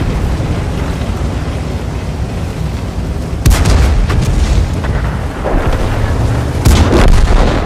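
From 3.46 to 4.61 s and again from 6.66 to 7.48 s, hard clipping occurs: the signal is driven about 8 dB past what the stage can pass, so peaks are sliced flat. The waveform shows squared-off tops; the spectrogram shows broadband harmonic smear. It sounds like harsh fuzz.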